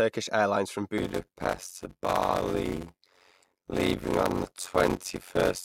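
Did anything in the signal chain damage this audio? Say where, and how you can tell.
Yes: from 0.98 s to the end, a block size mismatch (padded) at the buffer stage leaves a 92 Hz buzz and slows speech to 0.53× at normal pitch, unlike a sample-rate mismatch; this fits zero-padded 256-sample blocks.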